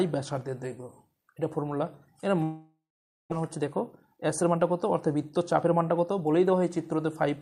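From 2.43 to 3.34 s the audio breaks off into a continuation of the last sound, a buzz or hiss, that fades into about half a second of silence, then resumes with roughly 0.6 s of material missing, likely a long network dropout. On a waveform this is a decaying tail followed by a flat gap. From 3.42 to 6.22 s a jitter buffer speed-up plays the audio at 109% speed with unchanged pitch, cutting about 0.3 s of delay so it sounds hurried. A spectrogram shows harmonics at steady frequencies while events crowd closer together in time.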